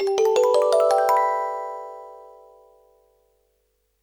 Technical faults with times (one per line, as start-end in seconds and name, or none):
none